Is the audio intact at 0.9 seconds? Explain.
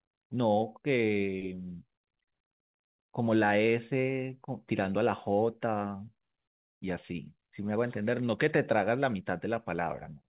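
Yes, the speech at 0.9 seconds is intact, with nothing interrupting or distorting it beyond the narrow telephone-band sound of the call path, which carries nothing above 4 kHz.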